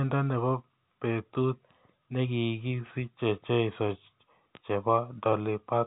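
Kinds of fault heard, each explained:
No faults can be heard in this speech recording.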